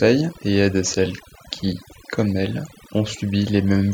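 Speech, marred throughout by overdone noise removal: an over-aggressive reducer keeps switching off individual frequency bands near its noise estimate, taking soft speech detail with them. Pauses fall to near silence sprinkled with twinkling specks. A spectrogram would show scattered isolated dots in the gaps and ragged, hollowed-out speech harmonics.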